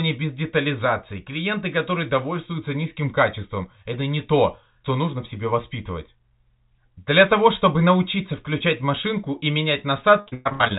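Choppy, robotic speech with pieces missing breaks up the final stretch from 10.2 to 10.78 s: repeated packet loss, each gap patched by stretching the previous sound before the next drop hits. The band-limited sound, with nothing above 4 kHz, fits a G.711 mu-law call codec at 64 kbps.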